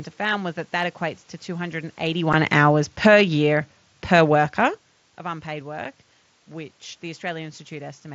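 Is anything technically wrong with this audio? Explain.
Yes. From 2.04 to 4.87 s the automatic gain control judged the input too loud and lowered its gain gradually, so the sound and its background sink together by about 5 dB. At 2.33 s and again at 5.85 s, unconcealed Bluetooth headset packet loss occurs: a single 7.5 ms frame on the mSBC link never arrived and was left as a gap, so the speech breaks with a short, abrupt-edged hole that can click.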